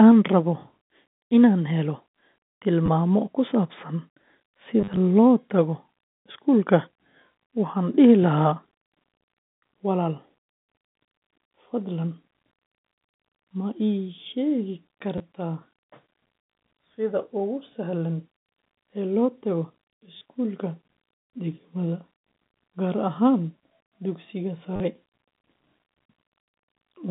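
At 2.86–2.88 s, 4.81–4.97 s, 15.18–15.20 s, 20.17–20.21 s and 24.76–24.80 s you get packet loss with the last packet repeated. Audio dropped out and the receiver kept replaying the previous chunk, so each gap buzzes briefly. The 4.81 s patch is the worst, with about 90 ms lost and scattered across 160 ms. The repeat size fits 10 ms packets, giving a roughly 100 Hz stutter over the G.711 phone band.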